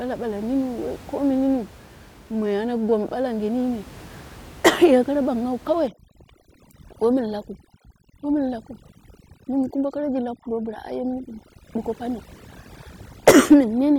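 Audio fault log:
5.88–13.98 s, overdone noise removal: right after "ye kara banghawa", the room noise, which sits about 23 dB below the speech before this point, drops and breaks up into twinkling specks. An over-aggressive noise reducer is pulling individual frequency bands down whenever they resemble its noise estimate, taking quiet speech detail with them. A noise gate would instead mute everything at once between phrases, without the scattered flickering residue.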